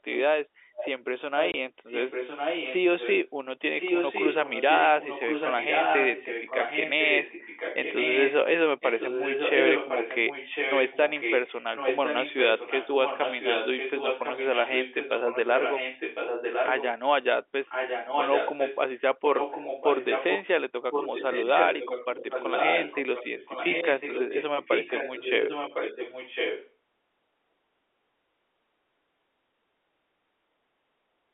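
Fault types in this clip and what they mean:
Echo leak: a copy of the speech returns about 1.05 s late, about 5 to 10 dB quieter, likely from a loudspeaker the echo canceller missed; spectrograms show repeated, shifted harmonic patterns.
Packet loss filled with silence: one 20 ms hole at 1.52 s, a hard-edged gap; the waveform drops abruptly to silence, and spectrograms show a blank vertical stripe.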